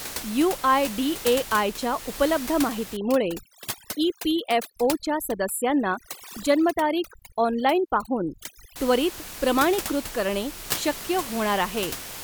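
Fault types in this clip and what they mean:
Overdone noise removal: over-aggressive noise reduction from 2.97 to 8.76 s cuts bands near the noise estimate, leaving a background that drops and breaks up into twinkling specks.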